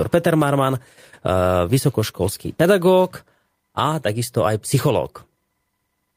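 No technical faults are audible.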